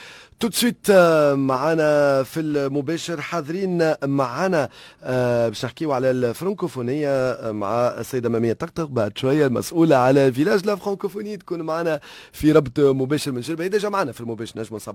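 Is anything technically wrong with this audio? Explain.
No, nothing technically wrong can be heard here.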